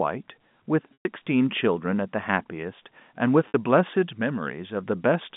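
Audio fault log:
0.93–1.05 s and 3.48–3.54 s, packet loss with pitch repetition: sound went missing for 120 ms and then 60 ms, a span that points to about four and then two lost packets. The receiver filled each gap by repeating the last pitch period, so the sound hangs on a buzzy, held tone that fades rather than cutting off. The audio then resumes with a brief cross-fade. A plain dropout would give abrupt silence instead of this held buzz.
3.96–5.13 s, loudspeaker feedback squeal: a single 6 kHz tone swells over about a third of a second and then sits about 5 dB above the speech until 5.13 s. It builds because the microphone is picking up the loudspeaker it feeds, and at that frequency the loop gain exceeds one. An interfering whistle or hum would arrive at a steady level from the start. This tone rises on its own, which marks it as a feedback loop.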